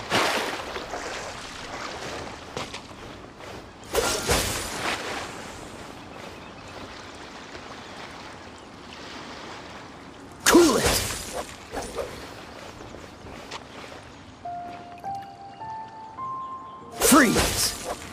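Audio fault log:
No faults turn up anywhere in this recording. Nothing in the sound points to a dropout, glitch or other defect in the audio chain.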